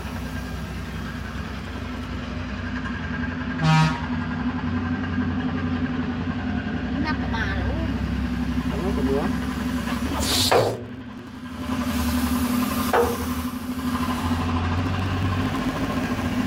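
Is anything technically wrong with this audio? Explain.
Yes, there's processor overload crackle in three bursts: 1.38 to 2.15 s, 10.06 to 11.75 s, and 14.78 to 16.32 s. The processor is falling behind and missing buffer deadlines one after another. Each miss drops a tiny slice, which points to buffers under a millisecond, so the sound gets gritty, torn crackle. The first burst is shorter, and the last two run longer and denser before it clears.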